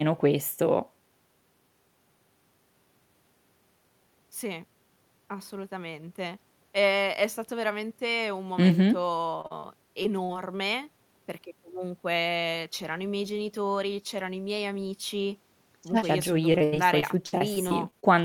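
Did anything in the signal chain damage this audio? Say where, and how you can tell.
Yes. Brief smears and wobbles in the speech at 9.41, 9.47, 9.60, 10.03 and 10.24 s show short concealed packet loss on the network path. Each time, 20 to 40 ms of audio arrived too late. The decoder stretched the preceding sound across the hole and blended back in.

From 16.52 to 18.05 s the speech turns choppy. This is repeated packet loss, giving a robotic sound. Ten separate gaps, the longest 80 ms, hit the network stream there. Concealment patched each one, and about a fifth of that stretch is synthesized fill, roughly 300 ms in all.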